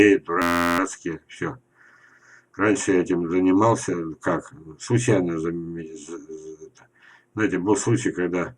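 A system hang loop at 0.42–0.79 s repeats one 11.61 ms fragment 32 times, a steady 86.1 Hz buzz that fits a 512-sample buffer cycling while the system froze.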